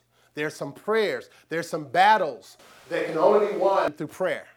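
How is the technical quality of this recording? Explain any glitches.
The recording has one clear glitch. A switch to a distant microphone occurs from 2.59 to 3.88 s: the speech abruptly turns roomy and hollow with thinner bass, at much the same level, likely because the close microphone dropped out and a farther one took over. Faint room noise sits well beneath the speech, and the close sound snaps back just as suddenly.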